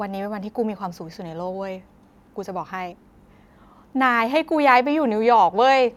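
No technical faults can be heard in this recording.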